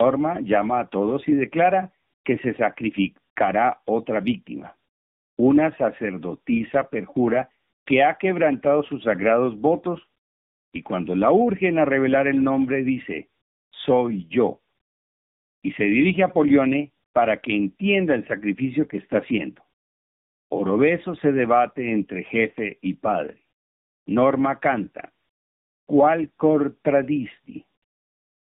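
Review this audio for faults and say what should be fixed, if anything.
Tandem speech coding affects the whole clip. The speech went through AMR-NB at 12.2 kbit/s, then G.711 A-law, then AMR-NB at 7.95 kbit/s. Each coder re-encoded the previous one's errors, leaving it rough, muffled and warbly. A spectrogram shows nothing above 3.7 kHz and smeared, wavering harmonics.

Keeping one codec end to end, through transcoder-free operation, would mean the speech is coded only once.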